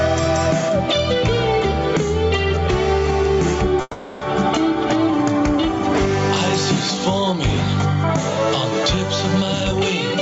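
Gain pumping runs through the whole clip. The level swings by roughly 10 dB, so loud and soft passages sit squashed together. The likely cause is microphone gain set far too high, with a fast limiter or compressor clamping each peak.

A call audio freeze follows from 3.81 to 4.23 s. The sound stalls and the last moment is stretched into a fading buzz or hiss for about 400 ms, dropping briefly to near silence for 30 ms, before resuming exactly where it left off with nothing lost. Packets were likely held up in transit and the jitter buffer ran dry. The receiver bridged the gap and now plays 400 ms later than before.

A jitter buffer speed-up comes from 9.41 to 9.73 s. The audio rushes ahead at 146% speed with its pitch unchanged, sounding hurried. Having accumulated surplus delay, the receiver trimmed out short pitch-period slices repeatedly, removing around 150 ms to pull latency back down.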